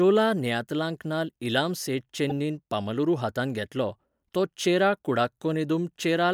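Speech, with one fault: damaged data in a compressed stream, from 2.30 to 2.32 s. It is heard as a brief blip. Corrupted bytes there made the decoder misread frames, lose sync, and hunt for the next valid frame header before playback resumed.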